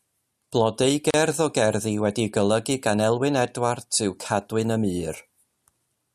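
At 1.11 s the speech drops out for about 35 ms, until 1.14 s, then resumes exactly where it left off. This is a gap at a join of encoded pieces: two segments were encoded separately and spliced without trimming, so the encoder's start-up delay and the padded final frame both remain as inserted silence. The codec smears the edges of the hole, so the truly silent part is shorter, and the dropout reads as a brief stutter in otherwise continuous sound.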